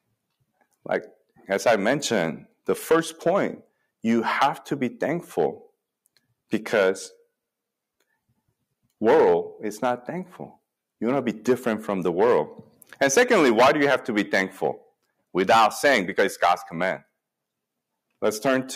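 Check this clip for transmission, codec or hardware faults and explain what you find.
One fault is present: hard clipping, running through the whole clip. The signal is driven about 14 dB past what a stage can pass, so peaks are sliced flat. Only a small fraction of samples hit the ceiling, so the harsh, buzzy crackle lands on loud moments. Unlike soft saturation's rounded warmth, these flat tops spray harmonics far up the spectrum.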